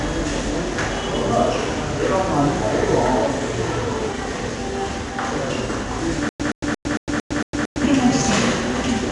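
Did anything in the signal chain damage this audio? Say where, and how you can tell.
Yes. At the codec stage, 4-bit ADPCM compression at 89 kbps leaves a gritty, level-following hiss throughout and nothing above 10.7 kHz, which fits a roughly 22 kHz sample rate.

At playback, a likely buffer stall caused a stutter with silent gaps from 6.29 to 7.84 s. A 120 ms fragment repeats seven times every 227 ms, with 107 ms of digital silence between repeats.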